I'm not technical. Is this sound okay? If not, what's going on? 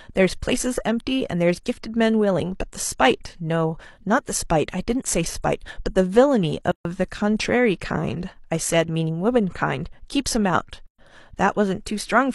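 No. The speech drops into brief silence twice, at 6.72 to 6.85 s (about 0.14 s) and at 10.87 to 10.99 s (about 0.12 s), then resumes exactly where it stopped. This is a gap at a join of encoded pieces: the recording was compressed in separate chunks and stuck back together without trimming the short stretch of silence each chunk carries at its edges. The starts and ends of both gaps are softened by the compression.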